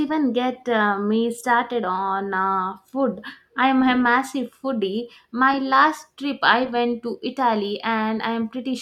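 No dropouts, glitches, distortion or other technical faults can be heard anywhere in the recording.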